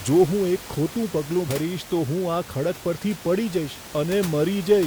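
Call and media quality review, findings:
Short blip in the speech at 1.44 to 1.48 s, about 40 ms. Damaged data in a compressed stream: the decoder hit corrupt bytes, lost frame sync and skipped to the next header. Room noise about 16 dB under the speech, not a fault.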